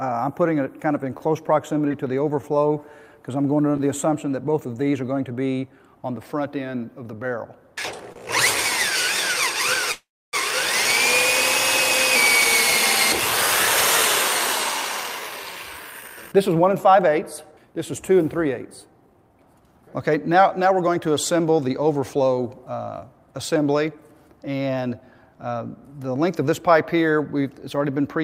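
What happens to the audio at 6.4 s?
Nothing goes wrong at 6.4 s; the audio there is intact, with no dropout, click, distortion or other fault.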